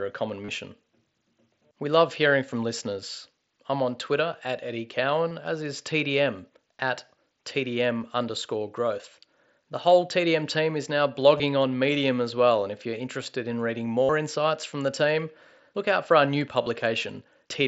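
Concealed Bluetooth headset packet loss breaks into this speech clip at 0.45 to 0.49 s, 5.29 s, 11.37 to 11.40 s, 14.03 to 14.09 s and 16.63 to 16.66 s, with gaps of 37.5, 15, 22.5, 60 and 30 ms. Packets dropped on the headset link, and the receiver filled each gap by repeating the closest-matching piece of the audio just before it. The 60 ms patch at 14.03 s sounds as a held, buzzy tone, ending in a slight warble as the real signal resumes, while the wideband mSBC link carries the sound up to 8 kHz.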